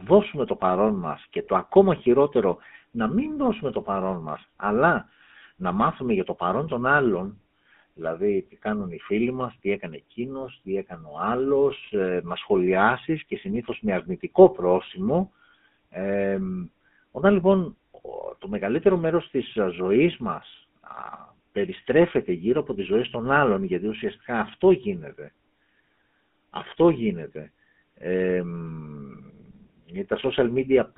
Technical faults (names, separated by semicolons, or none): GSM full-rate codec